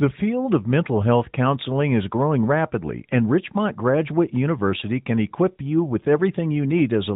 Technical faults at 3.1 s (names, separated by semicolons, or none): none